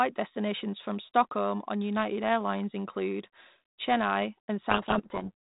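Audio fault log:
4.7–5.30 s, codec payload misread: the decoder unpacks the G.726 code words in the wrong bit order, so the speech drowns in harsh distortion until it clears.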